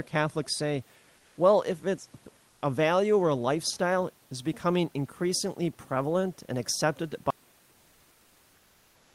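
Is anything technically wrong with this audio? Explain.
Yes. At 1.17–1.37 s and 2.49–2.61 s, comfort noise replaces the background, likely from Opus discontinuous transmission. The textured room noise becomes a smooth, featureless hiss (the second stretch about 2 dB quieter), which shows as a uniform grey band on a spectrogram.

From 7.30 s to the end, an audio dropout leaves only a faint residue of hiss, far below the speech level. The waveform collapses abruptly to a thin line, and the spectrogram goes nearly empty.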